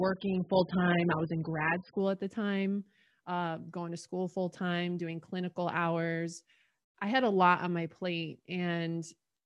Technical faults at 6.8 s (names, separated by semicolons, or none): none